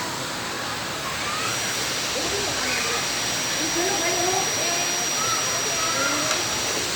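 A recording of everyday sound carrying a feedback whistle from 1.39 s to the end: a thin, steady 5.8 kHz tone, a few decibels below the main sound, swelling and fading slowly in level. It likely comes from a loudspeaker-to-microphone loop held just at the edge of feedback. A spectrogram shows it as a sharp horizontal line at 5.8 kHz starting at 1.39 s.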